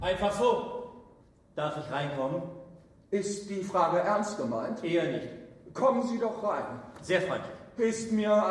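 Nothing audible to flag here; no dropouts, distortion or timing problems anywhere in the recording.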